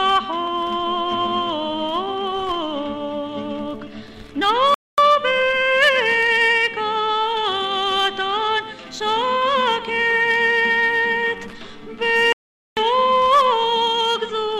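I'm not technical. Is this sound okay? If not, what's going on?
No. There are two playback stalls. The sound goes silent from 4.74 to 4.98 s and from 12.33 to 12.77 s. The player likely ran short of data.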